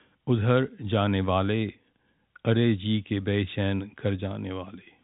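A short speech recording with no technical fault to report. It comes through G.711 telephone coding working as intended, so the sound stops short of 4 kHz and carries only the faint, level-following grain of that format's 8-bit logarithmic quantisation.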